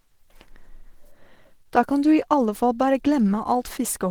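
Speech clip with plainly audible Opus compression throughout. It sounds hoarse and grainy even though it reaches 20.3 kHz, which fits hybrid mode at around 16 kbps as the likely cause.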